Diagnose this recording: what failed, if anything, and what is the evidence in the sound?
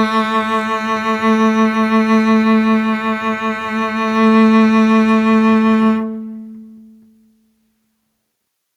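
Nothing failed; no faults heard.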